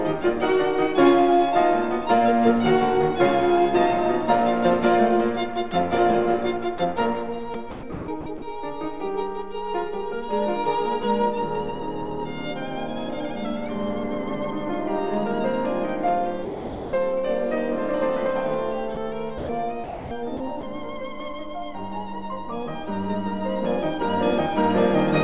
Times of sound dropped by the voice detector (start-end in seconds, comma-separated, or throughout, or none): 5.71, 6.78, 16.45-16.93, 18.95, 19.38-19.49, 19.84-20.11